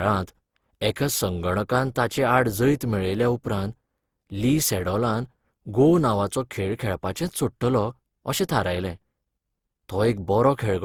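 From start to finish the speech has a swirly, hollow, smeared quality, with softened consonant attacks. That's likely generation loss: about seven rounds of lossy coding, consistent with Opus at 64 kbit/s, each pass stacking fresh quantisation noise.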